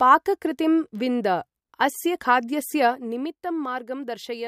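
Zipper noise, 2.88 to 3.32 s: the speech level falls roughly 10 dB in unsmoothed 1 dB steps, about thirty per second, each ticking. The waveform shows a staircase envelope; the spectrogram shows faint vertical click lines.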